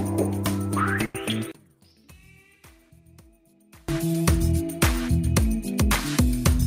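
A burst of packet loss runs from 1.05 to 1.15 s. About 90 ms of audio never arrived in time, and the receiver filled the gap by extending the last sound while fading it. The result is a held, dimming smear, after which the audio picks up with that stretch missing.

From 1.52 to 3.89 s the audio drops by about 30 dB and turns faint, leaving only the small mismatch between the channels. The likely cause is one channel inverted: reversed polarity on one side cancels the shared centre content when the channels are summed to mono.

A short concealed packet loss follows at 4.13 to 4.15 s. Roughly 10 ms was lost and patched by continuing the preceding sound before blending back into the real signal. It comes through as a brief smear or wobble.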